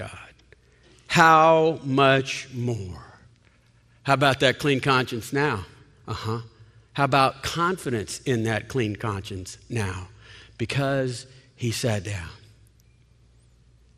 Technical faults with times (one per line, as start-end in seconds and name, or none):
0.00-13.97 MP2 compression